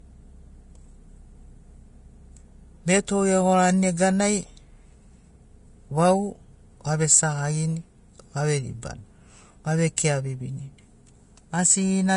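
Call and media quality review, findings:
Hissy, grainy speech throughout, treble gone above 10.6 kHz, roughened tones and smeared consonant attacks. Likely Vorbis compression: coarse residue quantisation swapping fine detail for similar-energy noise, cut-off pulled low. Damage plainly audible, fits a low bitrate around 32 kbps.

Pre-echo at 9.97 s: brief hiss leading a sharp attack, about 13 ms of smear before the onset. Block-spread quantisation noise sized for the loud transient bleeding into the quiet just ahead of it. Attack sounds softened.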